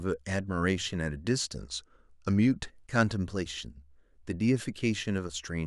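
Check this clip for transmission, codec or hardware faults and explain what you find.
One fault stands out, a drift correction step.

From 1.57 s to 2.66 s the speech suddenly slows and sags in pitch, dropping about a semitone (roughly 108 cents) with the pace about 6% slower, then snaps back to normal. The likely cause is clock-matching software that shifted the playback rate in a single step to rebalance its buffer, so speed and pitch moved together for that stretch before the rate was restored.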